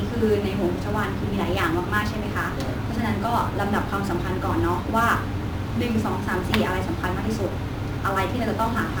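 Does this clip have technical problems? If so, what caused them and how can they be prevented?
Yes. Throughout the speech there is a grainy hiss and roughness that rides on the sound itself, swelling on loud passages and bright, sibilant moments and disappearing in the pauses. This is sample clock jitter: the converter's clock wanders by something on the order of 10 microseconds, so samples land early or late, and steep, fast-changing parts of the waveform turn that timing error into noise roughly 25 dB below the signal. Using a stable, low-jitter clock source prevents it.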